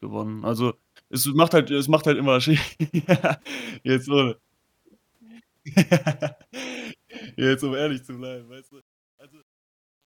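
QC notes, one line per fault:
7.42 to 10.08 s: truncation distortion on a fade. The speech fade-out grows gritty, roughest from 8.11 s. The fade keeps too few bits without dither, consistent with a 10-bit stage, so quiet levels become coarse square steps.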